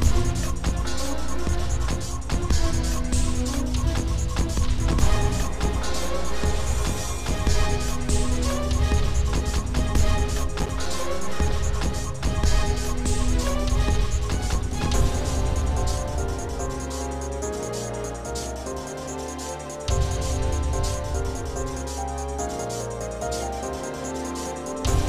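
The audio has a short burst of processor overload crackle from 10.59 to 10.86 s: the machine kept missing its tiny buffer deadlines, each miss dropping a few milliseconds of silence.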